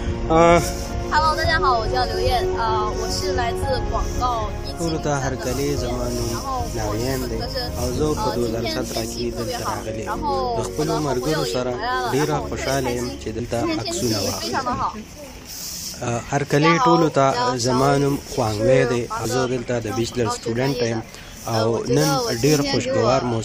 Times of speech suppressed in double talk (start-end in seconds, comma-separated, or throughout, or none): none